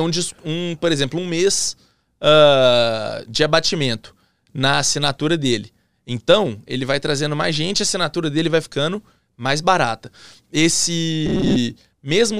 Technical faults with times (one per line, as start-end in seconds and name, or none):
11.26-11.56 robotic sound from repeated short buffers